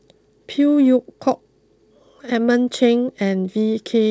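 No technical fault can be heard in this speech recording. It has come through a WebRTC call path working as intended, and the lack of any content above 8 kHz points to a wideband call codec such as G.722.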